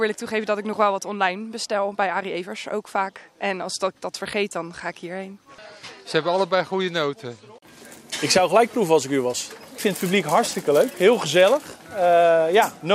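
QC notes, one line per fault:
Nothing stood out on listening.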